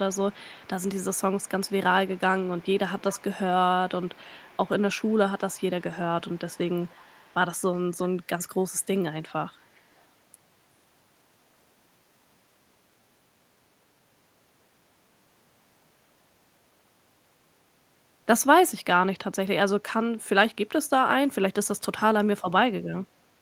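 An echo canceller on a loudspeaker end of the call was likely not removing everything its microphone picked up, so part of the far side's own speech was sent back. The result in this speech recording is echo leak: a faint copy of the voice, trailing 371 ms behind and sitting very low, roughly 25 to 35 dB under the speech, audible at 0.12–1.72 s, 2.07–3.24 s, 4.02–5.15 s, 5.49–7.77 s and 9.29–10.06 s.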